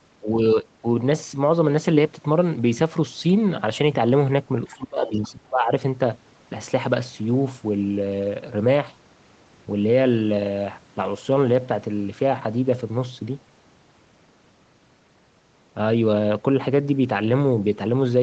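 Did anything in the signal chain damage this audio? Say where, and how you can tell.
Yes. Speech suppressed in double talk occurs at 0.2–0.37 s, 0.54–0.65 s, 0.81–0.85 s and 4.67–5.71 s, in the call processing. The level dips by about 15, 5 and 15 dB, then by about 25 dB for roughly a second. This is likely the echo canceller mistaking overlap for loudspeaker echo and ducking everything.

The other side's voice leaks through at 4.67–4.76 s and 5.07–5.29 s, also in the call processing. A faint second voice, about 25 and 20 dB below the talker, surfaces inside the suppressed stretch. The canceller likely left residual loudspeaker echo in the microphone signal.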